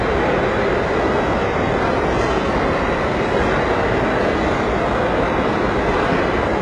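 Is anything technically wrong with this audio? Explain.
Yes. Throughout the clip, the treble has the signature of HE-AAC compression, likely at a very low bitrate on the order of 12 kbps. The codec keeps only the lower spectrum and synthesises the top by copying lower bands upward under a coarse envelope, so the upper harmonics no longer match the real ones. The damage is heavy: the highs sound gritty and metallic, and nothing exists above about 11.3 kHz.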